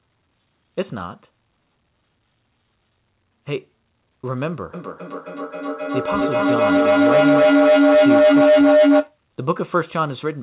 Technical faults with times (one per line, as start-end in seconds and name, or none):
4.74-9.18 feedback howl